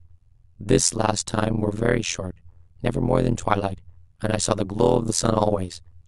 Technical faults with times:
0.00-6.07 overlap-add ripple

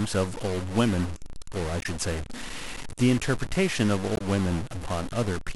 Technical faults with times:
0.00-5.56 stuck bit
1.79-1.86 damaged data in a compressed stream
4.14-4.21 damaged data in a compressed stream

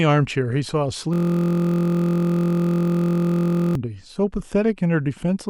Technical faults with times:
1.13-3.75 system hang loop

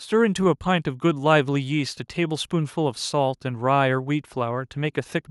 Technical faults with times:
none

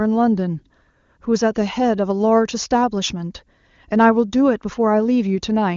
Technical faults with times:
none

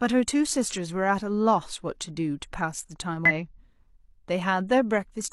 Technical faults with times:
3.25-3.32 compressed frames skipped

